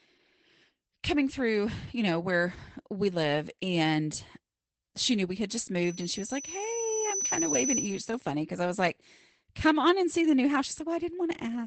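It's a speech clip with Opus voice compression all the way through. It sounds like the SILK speech mode at roughly 12 kbps: muffled and a bit hoarse, with nothing above 8.6 kHz. From 5.84 to 8.26 s, between "knew we had just" and "because I was like", there's a loudspeaker feedback squeal. A 6 kHz tone swells over about a second and a half until it sits a few dB above the speech.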